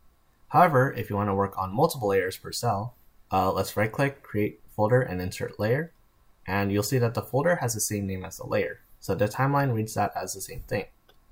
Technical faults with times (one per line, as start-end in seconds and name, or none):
none